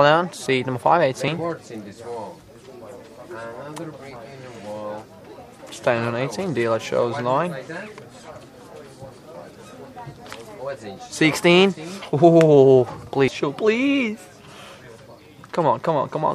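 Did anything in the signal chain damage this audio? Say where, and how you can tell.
Yes. The sound jumps forward with no silent gap at 0.46 s, 1.28 s and 13.28 s. Roughly 20 ms is skipped at each of the first two points and about 70 ms at the third. This points to the driver or buffer stage, with a dropped buffer (overrun) the likely cause: samples were overwritten before being collected, and the remaining audio was butted together. A waveform shows a hard splice with no gap, and a spectrogram shows an abrupt vertical seam.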